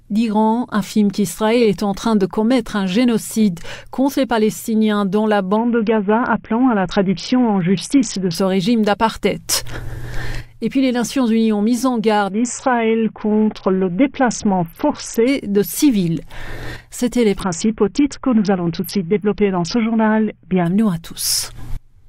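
Three Bluetooth SBC bit pool drops occur, from 5.56 to 8.35 s, 12.31 to 15.28 s and 17.40 to 20.66 s. In each, the encoder starves for bits as the link congests. The upper sub-bands lose their allocation and the remaining bands are quantised coarsely. The treble dulls and a gritty grain rises under the sound, consistent with the bit pool falling from around 31 to about 6, roughly 55 kbps, before full bandwidth returns.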